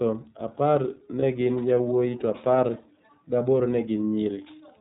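It's a speech clip run through the iLBC codec the whole way: nothing above 4 kHz, and a plainly rough, synthetic edge that fits the 13.33 kbps mode with 30 ms frames. There's also a lost iLBC frame at 1.19 to 1.23 s, just before "gin yawuowi to apar". The decoder papers over that 30 ms gap by repeating the last pitch cycle with noise, so you get a brief buzzy held vowel before it snaps straight back.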